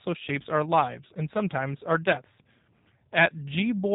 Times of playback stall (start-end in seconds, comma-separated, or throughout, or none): none